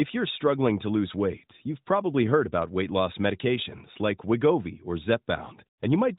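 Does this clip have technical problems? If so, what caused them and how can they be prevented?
No, this clip has no technical problems, so there is nothing to prevent.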